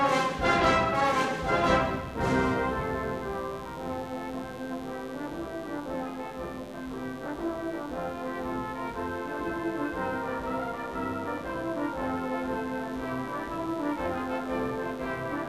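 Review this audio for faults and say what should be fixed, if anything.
Mains buzz runs through the whole clip: a dimmer, rectifier or unshielded cable is letting sharp switching spikes from the 50 Hz supply into the signal path, two per mains cycle. Those spikes carry a dense stack of 50 Hz harmonics up into the kilohertz range, so the audio has a steady, raspy buzz underneath it from start to finish, sitting roughly 20 dB below the wanted sound. To prevent it, keep audio cabling shielded and away from dimmers and power supplies, and use balanced connections with a common ground.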